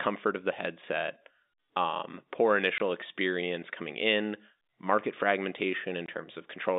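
At 2.78 to 2.80 s and again at 6.06 to 6.08 s, packet loss filled with silence punches 20 ms holes into the telephone-band speech, each fitting one lost packet. Each gap has hard edges, showing as a flat waveform and a blank vertical strip on a spectrogram.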